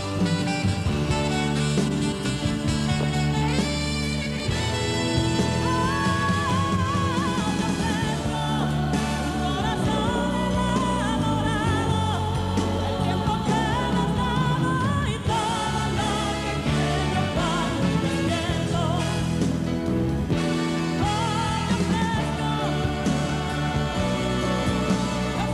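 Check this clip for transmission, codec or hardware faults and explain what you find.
There's one fault: clock drift buffer slips, running from about 0.19 s to 25.40 s. A click or pop lands roughly every 2.1 s, about fifteen in all, wherever there's signal. The likely cause is two devices on separate clocks drifting by roughly 500 ppm. The buffer between them slowly over- or under-fills, then drops or repeats a short block of samples, around 50 each, and that discontinuity is the tick you hear.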